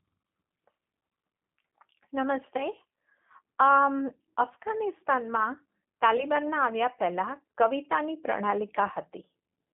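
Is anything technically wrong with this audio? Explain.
Yes. Throughout, the speech passes through the G.729 codec, which fits an 8 kbit/s link. It rebuilds each stretch from a vocal tract filter and a few pulses, leaving the voice band-limited to about 150 Hz to 3.4 kHz and plainly rough and synthetic.

From 6.17 to 6.26 s there is VoIP packet loss concealed by the speech codec. About 20 ms of audio went missing, which fits two 10 ms frames. The decoder extended its last pitch and filter at falling gain, so the voice blurs into a brief, fading smear and stays weakened as it recovers.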